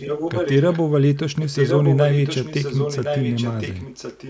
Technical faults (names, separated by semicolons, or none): echo leak